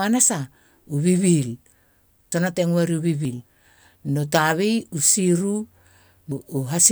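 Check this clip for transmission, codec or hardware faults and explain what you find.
There's one problem, showing up three times: the speech jumps ahead at 2.32, 3.25 and 6.32 s, with no gap. That's likely a dropped buffer (overrun), where audio got overwritten before being read. Roughly a tenth of a second goes missing at the first two, nearer a third at the last.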